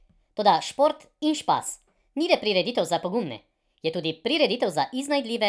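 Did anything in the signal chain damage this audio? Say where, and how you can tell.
Yes. A wrong sample rate at playback runs through the whole clip. The speech is about 1.38 times too fast and about 5.5 semitones high, which fits 16 kHz audio played at 22 kHz. Unlike a pitch shift or time-stretch, tempo and pitch move together by one ratio.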